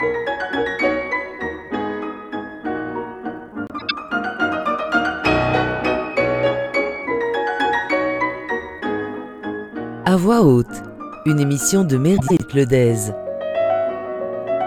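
At 3.67–3.91 s and again at 12.17–12.41 s, frames out of order swap two adjacent blocks of roughly 0.1 s each, which fits runs of four frames. The sound flutters garbled. A spectrogram shows abrupt vertical seams where the swapped halves meet.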